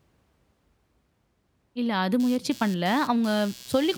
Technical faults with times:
2.20-3.97 computer activity noise

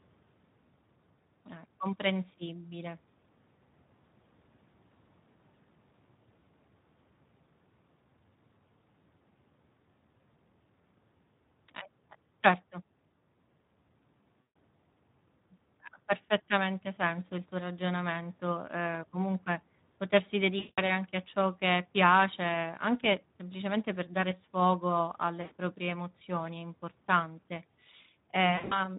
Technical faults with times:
0.00-28.98 Speex codec
14.47-14.49 VoIP packet loss concealed by the speech codec
20.59-20.81 VoIP packet loss concealed by the speech codec
25.41-25.53 VoIP packet loss concealed by the speech codec
28.55-28.79 VoIP packet loss concealed by the speech codec

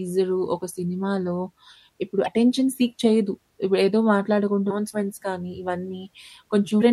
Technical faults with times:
2.24-2.28 damaged data in a compressed stream
6.78-6.83 damaged data in a compressed stream

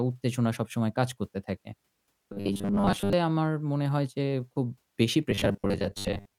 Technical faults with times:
2.33-3.13 robotic sound from repeated short buffers
5.31-6.38 robotic sound from repeated short buffers

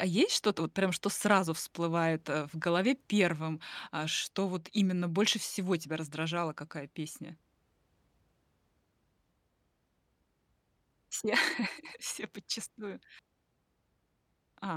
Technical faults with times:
none

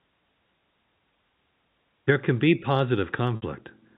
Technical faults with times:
3.36-3.42 packet loss with pitch repetition

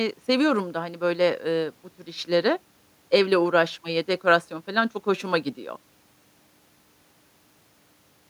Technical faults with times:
none

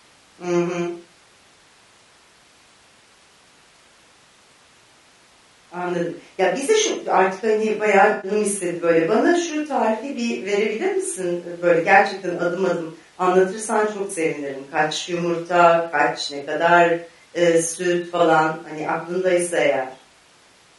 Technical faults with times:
0.00-20.79 low-delay AAC compression
8.11-8.31 AAC frame loss with concealment
14.07-14.10 AAC frame loss with concealment
18.17-18.20 AAC frame loss with concealment

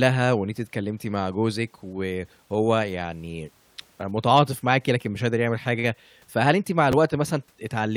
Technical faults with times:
6.92 repeated buffer

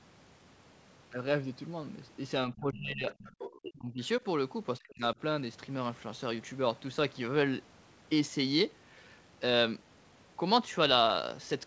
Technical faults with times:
2.49-3.08 speech suppressed in double talk
3.10-3.51 other side's voice leaking through
3.50-4.25 speech suppressed in double talk
4.79-5.16 speech suppressed in double talk

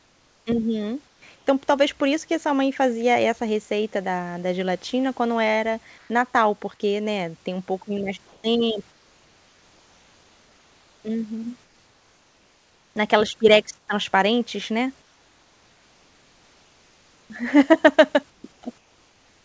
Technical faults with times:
0.00-1.22 comfort noise in place of the background
5.98-6.10 comfort noise in place of the background
8.28-12.96 comfort noise in place of the background
13.78-13.88 comfort noise in place of the background
15.02-17.30 comfort noise in place of the background
18.30-19.45 comfort noise in place of the background
18.42 onset clipped by the voice detector

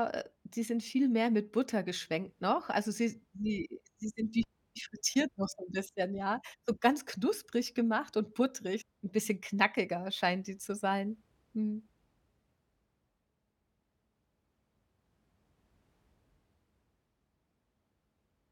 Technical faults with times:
8.80-8.82 stream segment skipped

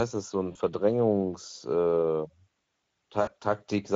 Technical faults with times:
0.00-3.95 Speex codec
0.51-0.57 VoIP packet loss concealed by the speech codec
3.21-3.34 VoIP packet loss concealed by the speech codec

